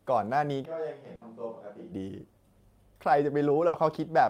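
A switch to a distant microphone runs from 0.66 to 1.92 s. The sound abruptly turns roomy and hollow, with thinner bass, a level drop of roughly 10 dB and room noise around 35 dB below the speech, likely because the close microphone dropped out and a farther one took over.

A burst of packet loss hits at 1.15 to 1.24 s and again at 3.67 to 3.76 s. Each time, the receiver stretches the last sound for about 60 ms, fading it, then resumes with roughly 60 ms of audio skipped.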